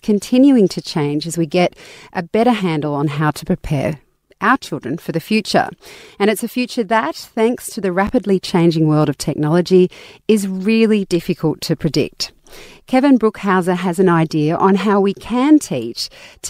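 Right after "that thanks to the", at 8.07 to 8.09 s, there's a brief chunks out of order glitch: one 10 ms chunk lands a chunk late, leaving a tiny jumbled blip before "changing world of technology".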